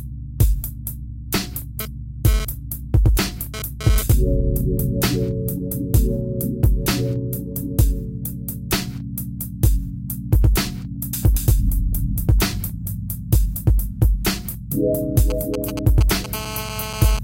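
From 1.80 to 4.12 s a GSM phone buzz sits about 10 dB below the sound: a nearby 2G handset moving data pulses its transmitter about 217 times a second, and the audio circuitry rectifies those bursts into a hard, raspy buzz that comes and goes. On a spectrogram it shows as a stack of evenly spaced harmonic lines at multiples of 217 Hz. The waveform carries a train of sharp, regular pulses.

From 15.30 to 16.26 s come GSM signalling bursts at around 10 dB below the sound. These are short clusters of rectified transmitter pulses, heard as a galloping dit-dit-dit of brief 217 Hz buzzes. They appear as grouped vertical streaks on the spectrogram and as pulse clumps in the waveform.

From 16.34 to 17.19 s the buzz returns, steady now, as the phone holds a call.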